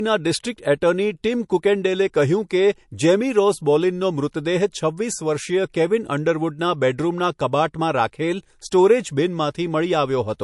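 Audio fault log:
Throughout: low-bitrate audio saved at a high bitrate. The spectrogram stops flat at 11.3 kHz and the speech stays smeared. This is likely a low-bitrate MP3 re-encoded higher, which restores nothing.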